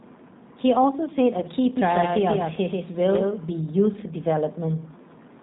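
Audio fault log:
throughout: G.729 codec. The sound is rough and synthetic, with nothing above 4 kHz. This fits an 8 kbit/s speech codec rebuilding each frame from a model.
1.40–1.47 s: VoIP packet loss concealed by the speech codec. About 20 ms went missing. The decoder stretched the previous frame into a fading buzz or coloured noise, and the sound stays weakened briefly after.
1.77–3.61 s: doubled audio track. A dry, full-band copy trails about 150 ms behind, a few dB quieter, and starts and stops abruptly. This is likely a second, slower capture path.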